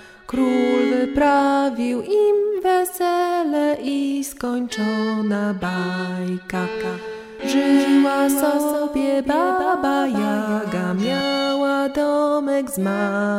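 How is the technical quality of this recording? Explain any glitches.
One fault is audible: a doubled audio track from 6.67 s to 11.21 s. A full-band copy trails about 0.3 s behind, roughly 5 dB quieter, with no decay or room colour, and starts and stops abruptly. Likely a second, slower capture path mixed in.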